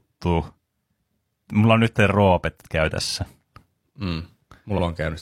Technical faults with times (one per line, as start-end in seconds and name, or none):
3.07-3.12 repeated frames
4.74-4.79 repeated frames